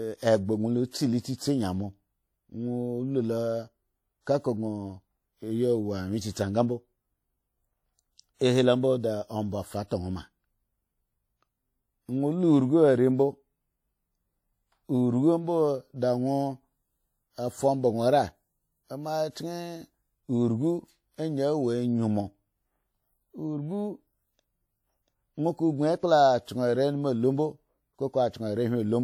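Throughout the clip the speech carries plainly audible WMA compression damage. The speech carries a ringing smear. A washy hiss rises and falls with the voice. That points to a transform codec running near 48 kbps. At that rate its long blocks spread quantisation noise over tens of milliseconds. Weak spectral detail gets dropped. Content still reaches about 20.1 kHz, so the top end is not cut. The likely cause is a low-bitrate WMA encode.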